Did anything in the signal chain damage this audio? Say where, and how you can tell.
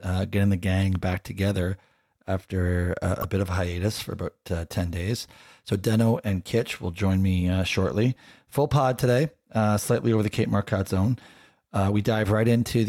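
Yes: damaged data in a compressed stream at 3.21–3.25 s, just before "a bit of hiatus". The decoder loses sync and produces a brief glitch.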